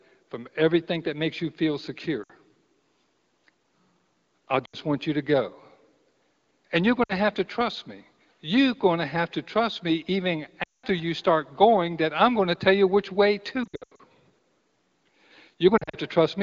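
Speech over an AMR wideband (HD Voice) link with light codec colouring, interrupted by lost AMR speech frames at 2.23 s after "that makes you feel", 4.65 s before "want you to go", 7.03 s, 10.63 s, 13.63 s after "tell you which way", and 15.78 s. Short gaps dip toward near silence as the decoder reuses stale settings at falling gain. The 0.2 s drop at 10.63 s falls to near silence within two frames, and the last two are choppy clusters of brief losses.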